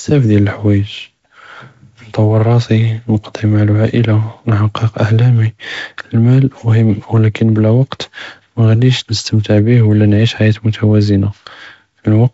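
The speech shows no technical faults, and its G.722 wideband telephone coding can be heard in a band limit near 7.7 kHz, a light hiss in the upper band and a slightly noisier lower band that fits the codec's 48 kbit/s mode.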